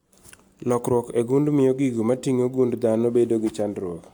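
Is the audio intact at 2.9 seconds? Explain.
Yes, the audio is intact at 2.9 seconds, with no fault to be heard at that moment.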